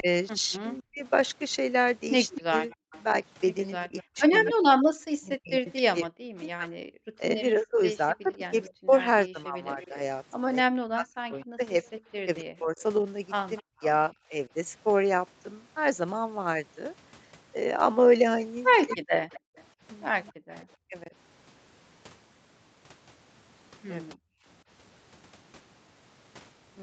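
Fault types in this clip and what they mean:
Speech suppressed in double talk: The echo canceller likely mistook overlapping talk for echo and turned it down, so the speech dips by up to about 40 dB through the first 14 seconds and again near 19–21 s.
Echo leak: The far end's echo canceller likely failed to remove its loudspeaker pickup, so a delayed copy of the speech about 250 ms behind returns roughly 15 dB quieter, from 2.34 to 13.62 s and 18.89 to 20.65 s.
Background gated by the echo canceller: The canceller clamped the microphone during loudspeaker playback, so the room sound drops by about 30 to 40 dB at 2.81, 13.63, 19.4 and 24.15 s, then returns.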